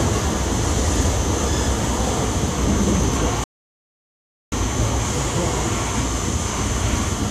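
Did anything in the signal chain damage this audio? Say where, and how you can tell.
Yes. Playback stage: a rebuffering stall at 3.44 s. The sound drops to silence and resumes unchanged at 4.52 s. The player ran dry, adding about 1.08 s.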